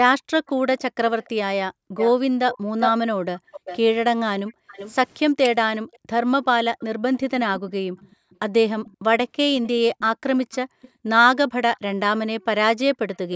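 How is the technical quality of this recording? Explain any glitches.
The recording has two clear call-path problems: the talker is repeatedly pushed down, and a delayed copy of the voice trails behind it. The audio stops at about 8 kHz, as is normal for call microphone processing.

Speech suppressed in double talk runs from 0.2 to 12.97 s, adding up to roughly four seconds of affected audio. The voice dips, thins or drops out in pieces, at worst by about 40 dB. The likely cause is an echo canceller that could not separate this talker from the loudspeaker echo while both sides spoke at once, so it turned everything down together.

Echo leak appears as a second copy of the voice arriving 390 ms late. It is present from 0.46 to 4.94 s at about 10 dB below the speech, from 5.93 to 8.97 s at about 30 dB below, from 9.98 to 11.79 s at about 25 dB below, and from 13.15 s to the end at about 25 dB below. 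The first stretch is the most audible. The echo likely comes from a loudspeaker on one side whose canceller let part of its microphone pickup return down the line.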